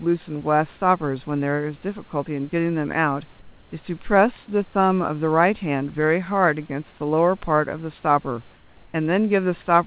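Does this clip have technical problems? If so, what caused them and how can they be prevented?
Yes. Comfort noise in place of the background appears at 3.4–3.72 s and 8.56–8.94 s. The room tone becomes steady, featureless and about 2 dB quieter. A noise gate would leave silence instead. The likely cause is discontinuous transmission. Turning off DTX on the sending side prevents it.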